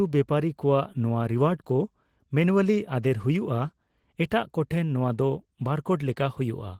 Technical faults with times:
0.00-6.80 Opus voice compression

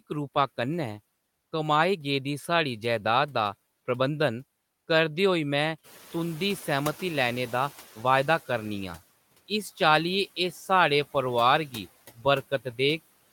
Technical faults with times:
5.83-8.42 noise suppressor catching up

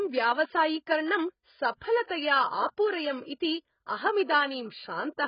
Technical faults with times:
0.00-5.28 AAC compression

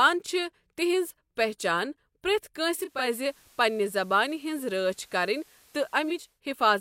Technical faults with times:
2.74-6.41 digital radio blending to analogue

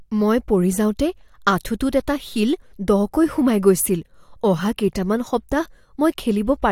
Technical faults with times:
none

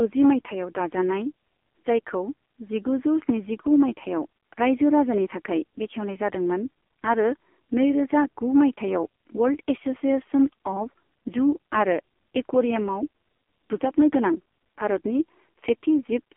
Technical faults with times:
0.00-16.36 AMR narrowband mobile codec

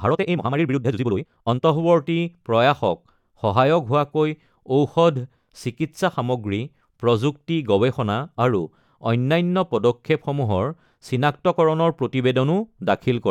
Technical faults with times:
0.00-1.62 time-stretched section

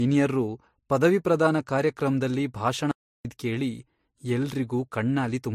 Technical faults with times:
0.00-5.54 transcoding between lossy codecs
2.91-3.25 audio dropout to silence

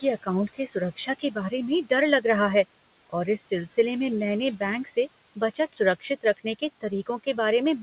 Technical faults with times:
0.00-7.83 noise suppressor artifacts
0.48-1.52 speech cut by the noise suppressor
3.38-3.52 speech cut by the noise suppressor
4.84-4.95 speech cut by the noise suppressor
5.36-6.61 speech cut by the noise suppressor

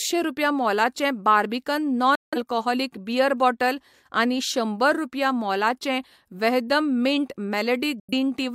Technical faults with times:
2.15-2.38 digital broadcast dropout
8.00-8.14 digital broadcast dropout

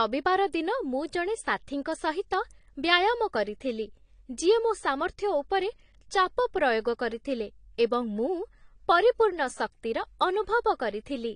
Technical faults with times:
0.00-11.35 AAC compression

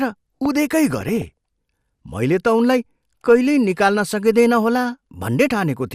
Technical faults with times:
0.00-5.94 MP2 compression
0.45-0.48 loud pop
0.90-1.30 DAB burbling

